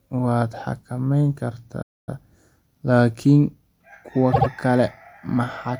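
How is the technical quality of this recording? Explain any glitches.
The recording has two clear glitches, a dropout and a stutter.

Playback stall, 1.82 to 2.09 s, right after "waad xakamayn": the player likely ran short of data or had its thread held up, so output stopped. The speech cuts to silence for about a quarter of a second (251 ms), then carries on from where it broke off.

Repeated frames, 4.32 to 4.47 s: a block of compressed audio about 78 ms long was delivered more than once, which points to a short run of frames being resent. The decoder plays that block twice more, producing a stuttering echo that adds about 157 ms to the speech.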